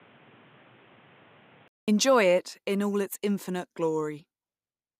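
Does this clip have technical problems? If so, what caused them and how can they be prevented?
Yes. From 0.0 to 1.88 s the speech sounds dull and boxy, with nothing above 3.8 kHz and faint added background noise well below the voice. Then it goes silent for 200 ms and clears up. The likely cause is an input switched to a poorer device. To prevent it, lock the recording input to one microphone and turn off automatic device or headset-profile switching.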